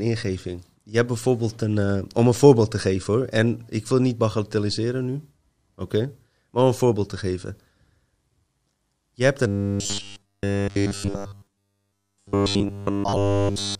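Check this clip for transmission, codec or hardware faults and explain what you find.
One fault, robotic sound from repeated short buffers, runs from 9.47 s to 13.79 s. Fresh audio is likely arriving too seldom, so a roughly 10 ms block is looped in place of nearly all the real signal. That imposes a fixed 100 Hz buzz, turning the speech metallic and rigid while it still loosely tracks the talking.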